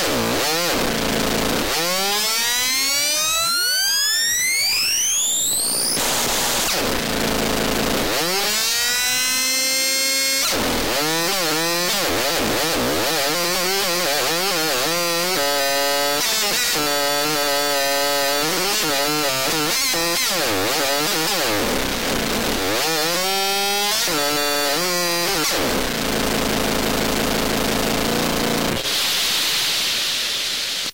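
No technical faults are audible.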